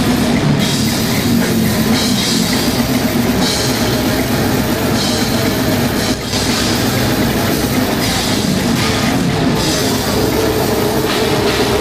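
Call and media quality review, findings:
Sudden gain jump, 6.14 to 6.33 s: level drops about 6 dB in a single step, background noise falling with the sound, then returns. Likely a gain setting or one-bit shift applied without a ramp in the digital gain stage.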